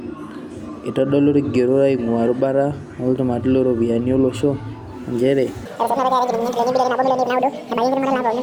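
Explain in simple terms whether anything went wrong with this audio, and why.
From 5.66 s to the end, the speech runs at almost double speed, about 1.99 times, and sounds much higher and rushed. This is a section at the wrong speed, likely from playback on the wrong clock.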